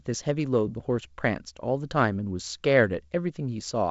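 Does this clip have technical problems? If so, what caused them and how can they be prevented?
No, this speech clip has no technical problems.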